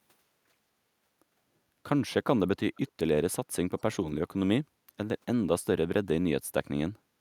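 Echo leak in this speech clip at 2.76–2.91 s and 3.78–3.82 s: faint scraps of the voice return about 270 ms late, very quiet, likely from a far-end loudspeaker echo canceller letting residue through.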